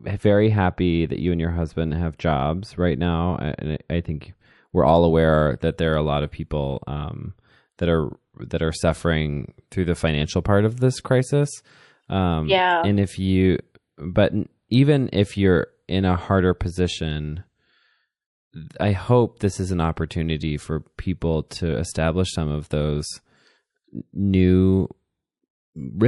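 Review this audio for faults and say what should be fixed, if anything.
Throughout the speech, a watery, swirling texture with chirpy s sounds is likely MP3 compression at a low bitrate, around 48 kbps; unlike a simple treble cut, the artefacts flicker. Encode at a higher bitrate.

From 0 to 4.88 s, just before "aware that there are", the sound is muffled by de-emphasis applied wrongly, a smooth slope about 13 dB down at 10 kHz. It is steady, not swirly like codec loss. Apply de-emphasis only to pre-emphasised sources.

At 21.48 to 21.51 s, between "an opportunity for people" and "establish some of those", pre-echo puts a 27 ms hiss, about 17 dB up, ahead of an attack. This points to a roughly 48 ms block with no switch to short blocks. Unlike steady hiss, it appears only before the onset. Enable block switching in the encoder.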